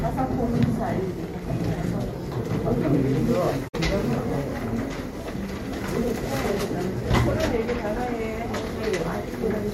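A clip of sounds with AAC frame loss with muting: the decoder zeroed missing frames from 3.68 to 3.75 s, a 64 ms gap that fits about three lost frames, leaving a soft-faded hole.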